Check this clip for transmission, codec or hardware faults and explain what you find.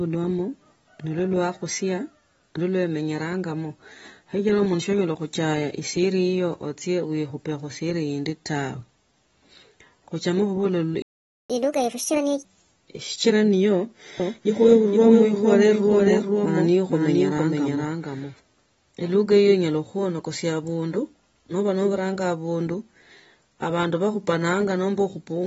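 The speech carries codec damage throughout, plus a dropout, a sped-up stretch and a doubled passage in the middle.

Throughout, the speech sounds plainly dull and smeared, which points to AAC compression, likely AAC-LC at around 24 kbps, where the encoder trims the high end and thins the spectrum.

At 11.02 s the audio cuts out for about 475 ms, then resumes at 11.50 s. That's a playback stall, where the player likely ran out of data or was blocked.

From 11.50 to 12.45 s it runs at 1.5x speed, pitched up about seven semitones. That's catch-up at higher speed, resampling the backlog to win back the lost time.

From 14.20 to 18.34 s a second copy of the speech follows roughly half a second behind, around 5 dB quieter, with no room colour and abrupt edges. It's likely a doubled audio track, from a second capture path or two out-of-step copies in an edit.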